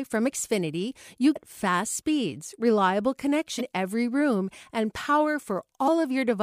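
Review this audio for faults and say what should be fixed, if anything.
Damaged data in the compressed stream produces three short, roughly 40 ms glitches: 1.32 to 1.36 s just before "fast speeds reliable", 3.57 to 3.61 s between "fast speeds reliable" and "every room and", and 5.84 to 5.89 s. At each point, corrupted frames cause the decoder to lose sync and search for the next header. To prevent this, verify stream integrity with checksums and retransmit or re-encode damaged segments.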